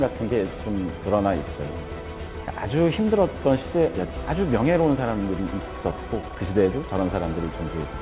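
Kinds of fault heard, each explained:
Skip ahead: Around 4.16 s the playback jumps forward, dropping roughly a second of audio that was already queued behind the gap. The two sides butt together almost directly, so the sound lurches on with no pause, just a sudden, abrupt join.
Jitter buffer speed-up: From about 4.69 s to 6.9 s the receiver trims out tiny pitch-period chunks over and over to work off excess buffered delay, about a third of a second in total. Everything runs at 114% speed, same pitch, and it feels noticeably rushed.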